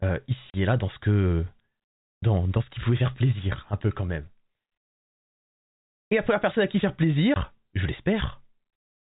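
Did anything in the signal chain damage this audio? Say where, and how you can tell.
Yes. The network stage dropped audio and the receiver filled the gaps with silence. At 0.50 s a 40 ms hole cuts the speech just before "et là dans ce", and at 7.34 s a 20 ms hole follows "personne à qui faire". Both gaps start and stop abruptly. Their lengths are whole multiples of 20 ms, which fits lost 20 ms packets, two at the first point and one at the second. This is packet loss filled with silence, with no concealment applied.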